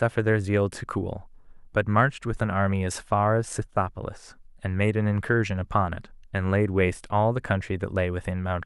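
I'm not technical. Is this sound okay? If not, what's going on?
Yes, nothing stood out as a problem when listening to this recording.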